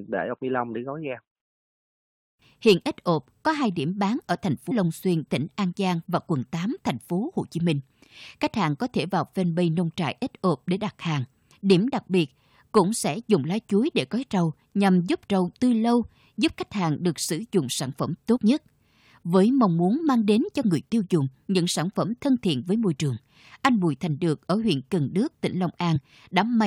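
Compressed frames get skipped three times: just after "điểm bán ở thành" at 4.70–4.72 s (roughly a tenth of a second gone), after "sử dụng sản phẩm" at 18.36–18.38 s (about 50 ms), and at 25.95–25.97 s (one frame). Whole frames, which fit a 23.2 ms frame length, never reach playback, so the sound jumps ahead.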